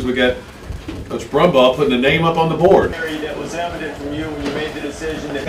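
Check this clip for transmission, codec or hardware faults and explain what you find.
GSM signalling bursts interfere from 0.48 to 1.59 s. A nearby 2G phone transmitting short signalling bursts gets rectified by the audio circuitry, so its 217 Hz burst rate becomes audible as a galloping dit-dit-dit of brief buzzes, about 20 dB below the main audio.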